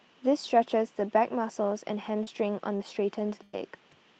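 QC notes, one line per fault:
2.23–2.30 s and 2.77–2.84 s, short concealed packet loss: about 40 ms of audio went missing each time. The receiver extended the preceding sound for roughly 30 ms and blended back, heard as a brief smear or wobble, with a little extra length added at the second spot.
2.27–2.29 s, 2.80–2.82 s and 3.53–3.55 s, lost packet rebuilt from error correction: each 20 ms frame came from the low-bitrate backup copy carried in the next Opus packet, so there is no gap, just a short patch of rougher, noisier texture.
3.43–3.56 s, burst of packet loss: about 100 ms failed to arrive, and the receiver stretched the last sound across roughly 102 ms while turning it down, so it turns into a held, fading buzz or hiss before the audio resumes further on. The missing part never returns.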